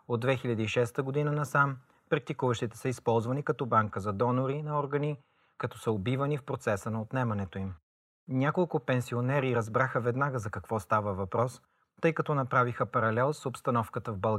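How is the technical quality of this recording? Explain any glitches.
Nothing stood out as a technical problem when listening to this speech recording.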